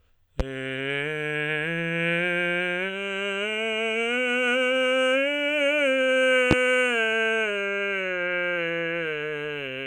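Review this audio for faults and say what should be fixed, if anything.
Two loud pops sit on top of the music, at 0.40 to 0.43 s and 6.51 to 6.54 s, each a single sharp click roughly 15 and 20 dB above the track. The likely cause is a voltage spike from a plug, switch or static discharge. Seat the connections before recording and keep switching off the live signal path.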